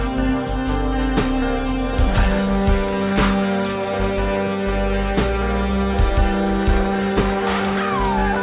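No technical faults can be heard anywhere in the audio. It has passed through a call path and carries nothing above 4 kHz, the narrowband ceiling that fits a telephone codec such as G.711.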